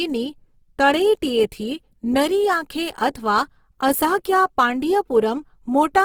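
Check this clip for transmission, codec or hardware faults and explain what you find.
There's one fault, and it runs the whole clip: Opus compression, likely at a very low rate, around 16 kbps. In its music mode the codec keeps each band's energy but fills starved bands with folded or noisy content, so the speech sounds rough and grainy throughout.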